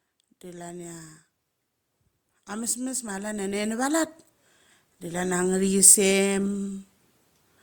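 Automatic gain rising shows up three times in this speech clip: from 0.42 to 1.16 s (about 4 dB), from 2.32 to 4.17 s (about 9 dB), and from 4.86 to 5.77 s (about 4 dB). In each case the gain control judged the input too quiet and pushed its gain up gradually, so the voice and the background noise floor swell together rather than the voice alone getting louder.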